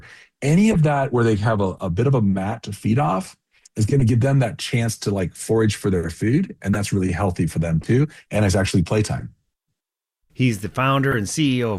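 Six short bursts from corrupt frame decoded run through the audio at 0.67–0.76 s, 2.51–2.58 s, 4.00–4.02 s, 6.73–6.78 s, 7.82–7.88 s and 11.11–11.14 s, each heard as a chirp, squeak, blip or burst of noise. Damaged compressed frames, from one to a handful per event, were decoded anyway, so misread gains and codes put energy in the wrong bands, peaking around −10 to −15 dBFS. A spectrogram shows isolated vertical smears of misplaced energy, and the waveform shows short spikes.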